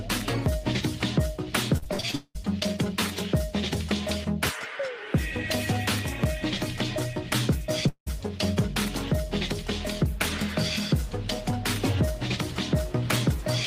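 Repeated packet loss (robotic sound) runs from 1.77 to 2.37 s: a rapid series of short holes, the longest about 0.19 s, each patched by stretching the preceding sound. Well over half that stretch is filled in this way, so the audio turns choppy, with pieces missing. At 7.89 to 8.08 s the sound freezes into a fading buzz and then drops to about 90 ms of silence before resuming with roughly 0.18 s of material gone, most likely a long network dropout that the receiver could only partly cover.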